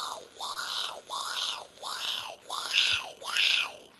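At 0.53 to 0.58 s there is short concealed packet loss: 20 ms was lost and patched by extending the preceding sound. It is heard as a brief smear, and on a spectrogram it shows as a smooth, repeating patch.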